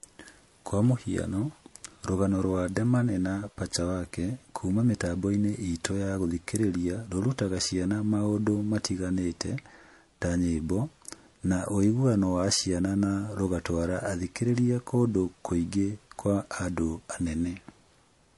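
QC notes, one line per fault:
throughout: MP3 compression, likely the cause of the watery, swirly treble, dulled top end and smeared attacks; the damage is plainly audible and fits a bitrate around 48 kbps.
14.55–14.58 s: pre-echo, a hiss about 10 dB up spreading 21 ms before an attack, which is softened; this fits long transform blocks with no switch to short ones.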